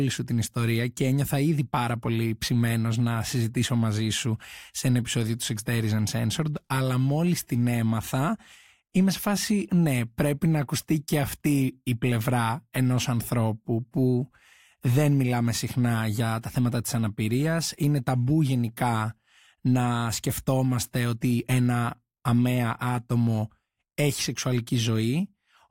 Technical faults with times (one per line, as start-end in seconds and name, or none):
none